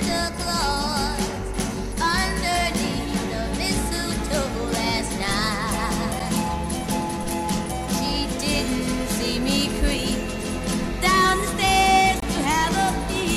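At 6.19 s the sound drops out for about 8 ms. At 12.20 to 12.22 s it drops out again, for about 22 ms. Both are a gap between stream segments. The timestamps left a hole, filled with silence. The edges are hard. The gaps fall at 6 s intervals.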